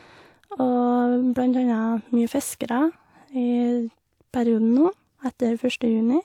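No technical faults can be heard anywhere in the recording. There is nothing to place in time or to trace to a cause.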